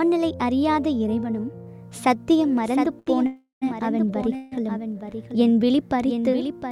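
From 2.53 s to the end, a doubled audio track appears: a second full-band copy of the sound trails about 0.7 s behind the original, roughly 10 dB quieter. It has no reverb tail or room colour, just a clean, out-of-step repeat that cuts in abruptly at 2.53 s rather than fading in. The likely cause is the same signal being picked up a second time through a slower path, or an edit leaving two copies layered out of alignment.

At 2.99 s there's a short stall from a late packet, lasting until 3.08 s. A packet missed its slot, the jitter buffer ran dry, and the receiver held the last bit of sound for about 71 ms until it turned up. Nothing was lost, and playback picks up right where it paused. You hear a sound hanging on a touch too long, with a faint buzz or dip.

Then there are two call audio freezes. The first runs from 3.26 to 3.64 s. The last sound is stretched into a buzz or hiss that fades, then about 140 ms of silence follows before the audio resumes. 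About 351 ms is inserted in all. The second, from 4.36 to 4.53 s, is a shorter 159 ms fill that never reaches silence. Both likely come from packets held up in transit and the buffer emptying. Nothing is missing, but each freeze pushes everything after it later.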